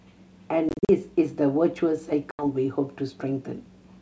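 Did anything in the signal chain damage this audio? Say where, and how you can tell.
Yes. The damage happens in the network: packet loss on an ADPCM call. From 0.69 to 0.89 s, about 140 ms of speech is lost in scattered hard-edged gaps. The longest run is 40 ms. A second hole spans 2.31 to 2.46 s and loses 80 ms. Silence fills each gap. The decoder's predictor and step size then drift from the sender's, so the speech comes back slightly distorted before it settles.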